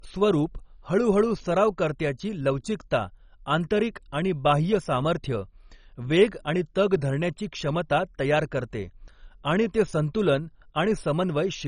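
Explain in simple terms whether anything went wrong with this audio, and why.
The speech sounds dull and gurgling from start to finish. Nothing reaches above about 10.4 kHz. This points to heavy MP2 compression, which likely ran short of bits. It then switched off the upper frequency bands and quantised the rest coarsely, leaving that granular, low-grade digital-radio character.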